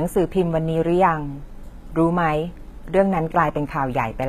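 HE-AAC compression is plainly audible throughout. The treble is likely rebuilt from copied lower bands, so s sounds turn gritty. Nothing passes 14.8 kHz, fitting roughly 20 kbps.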